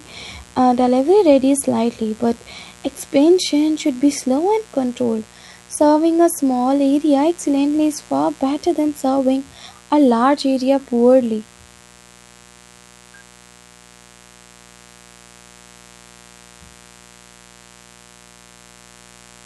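Mains buzz from 60 Hz power runs under the whole speech clip: switching spikes leaking in twice per cycle, through a dimmer, rectifier or missing shield, put a dense stack of harmonics up into the kilohertz range, heard as a steady, raspy buzz roughly 30 dB below the speech.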